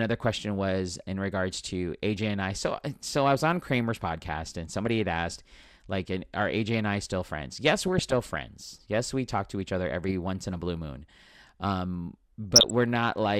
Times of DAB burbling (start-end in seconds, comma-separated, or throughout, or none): 4.84-4.97, 7.85-8.38, 10.06-10.11, 12.51-12.70